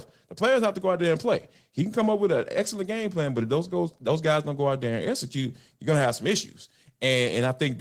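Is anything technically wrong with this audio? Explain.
Yes, there's Opus voice compression across the whole speech clip, and the damage is plainly audible. It sounds like hybrid mode at about 16 kbps in 20 ms frames: the SILK linear-prediction coder carries the band below 8 kHz, and a thin CELT layer sketches the top so the band reaches fullband. At that bitrate the excitation is coded coarsely, so the voice comes out hoarse and a bit robotic.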